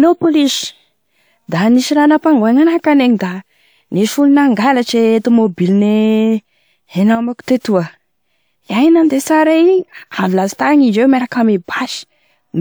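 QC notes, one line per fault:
7.15–7.43 s, sudden gain jump: the speech and the background noise both drop by about 8 dB in a single step and recover at 7.43 s, with no fade either way. This is likely a digital gain setting applied instantly, without a ramp.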